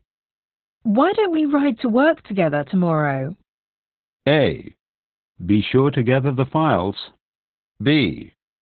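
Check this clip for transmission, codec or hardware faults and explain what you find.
One codec fault runs through the whole clip. Opus voice compression: the speech is limited to narrowband, with nothing above about 4.4 kHz. The coarse linear-prediction coding of the excitation, typical of SILK at a very low bitrate around 8 kbps, causes heavy codec damage, so the speech sounds muffled, hoarse and robotic.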